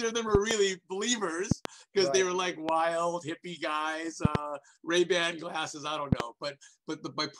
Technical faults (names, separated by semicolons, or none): loud pop